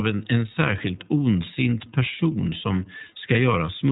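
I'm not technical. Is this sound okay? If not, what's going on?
No. Two problems run from start to finish.

Behind the speech there is a buzzing, scratchy hum that pulses about 300 times a second and sits well below the voice. This is computer activity noise. When the computer works harder, or the mouse moves, its electrical load shifts a ground connection shared with the audio circuit, and that disturbance leaks into the recording. It follows what the computer is doing, not what is being said.

The speech is clear enough to follow but sounds plainly rough, slightly robotic, and muffled, with no crisp top end. That comes from the iLBC codec, a compression method used for internet phone calls. It handles the sound in separate 30 millisecond chunks and throws away everything above 4 kHz, which removes the brightness and adds that synthetic edge.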